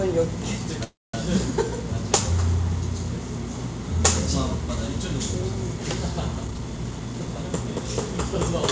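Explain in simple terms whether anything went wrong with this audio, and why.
Two things go wrong. From 0.84 to 1.15 s the sound stalls: the last bit hangs on as a brief fading buzz or hiss, then drops to near silence for about 0.22 s before resuming. This is a call audio freeze, likely caused by delayed network packets leaving the playback buffer empty. Nothing is lost, but everything after arrives about 0.3 s late.

From 6.45 to 7.50 s the sound rushes, playing at about 126% speed with no change in pitch. This is a jitter buffer speed-up: the receiver snipped out many tiny slices, roughly 0.3 s in total, to cut the built-up delay. The call link itself passes nothing above 8 kHz.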